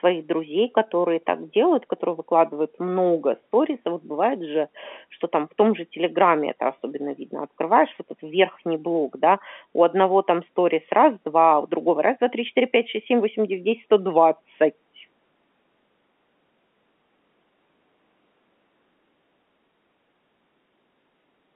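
Nothing stood out on listening to this speech recording, which carries the narrow band of a telephone line.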